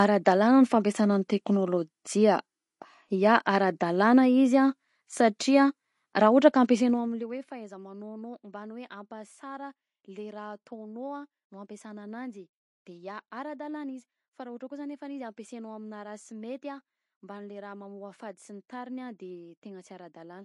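Across the whole clip the speech carries plainly audible codec damage. Nothing is left above 11.3 kHz. Weak detail flickers in and out between frames, giving a watery, swirling quality. The s sounds turn metallic and chirpy, and attacks smear. This is likely MP3 compression. The encoder ran short of bits and zeroed the quieter frequency lines. It also cut the treble at a fixed point. The damage fits a low bitrate of around 48 kbps.

At 5.39 s there is a pre-echo. A short hiss, about 10 ms long, comes just before a sharp attack. The attack sounds softened. The attack fell late in a transform block. The codec spread its quantisation noise across the whole block, so noise sized for the loud attack also filled the quiet moment before it.

From 6.73 to 7.43 s there is zipper noise. The level falls by roughly 20 dB, but not smoothly. It drops in steps of about 1 dB, around thirty a second. Each step leaves a small click, so a fast ticking or zipping rides on the speech while the level moves. 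The gain was changed in coarse increments with no smoothing between them.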